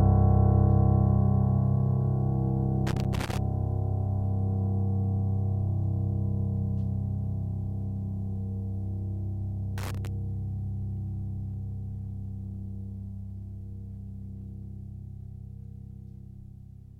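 Music clip with two bursts of loose connector crackle, from 2.87 to 3.38 s and from 9.78 to 10.07 s. A worn or dirty contact keeps making and breaking as it shifts, chopping the signal into irregular scratchy fragments, with pops wherever DC on the line switches in and out.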